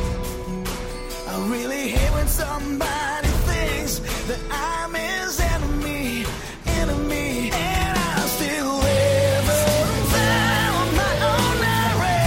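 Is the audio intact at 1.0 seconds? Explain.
Yes, the audio is intact at 1.0 seconds, with no dropout, click, distortion or other fault audible at that moment.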